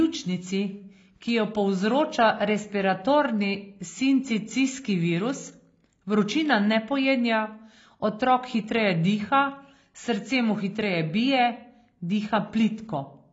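Speech, and the whole thing carries plainly audible AAC compression damage from start to finish. Nothing survives above about 7.5 kHz, so the top end is simply gone and the voice sounds dull. Sibilants and held vowels have that smeared, warbly, fizzy texture. The likely cause is an AAC-LC encode at a low rate, something like 24 kbps, where the encoder drops high bands and quantises what's left too coarsely.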